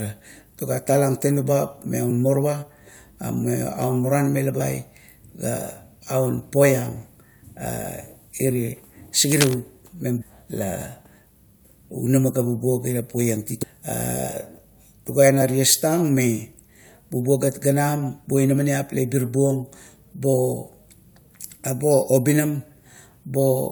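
Damaged data in a compressed stream causes short glitches at 2.10 and 4.60 s. The decoder misreads broken frames, loses sync and searches for the next frame header. Scratchy cable noise from 9.32 to 9.55 s sits a little below the speech, likely from a worn connector being moved. The same stream damage returns at 10.18 to 10.23 s, 13.62 to 13.64 s and 15.41 s as blips.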